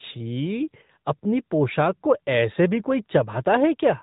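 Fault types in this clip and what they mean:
AMR narrowband mobile codec: speech rebuilt from a vocal-tract model, cut off above 3.8 kHz, with plainly audible buzzy, synthetic coloration that fits a 10.2 kbps mode.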